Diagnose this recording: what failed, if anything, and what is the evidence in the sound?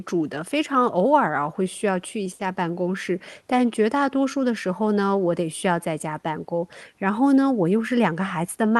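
The network stage hiccupped: a short stall from a late packet at 2.33 to 2.41 s in the speech. The jitter buffer ran dry, so the receiver held the last sound for about 60 ms, then picked up where it left off. Nothing's lost, just a stretched sound and 60 ms of extra delay.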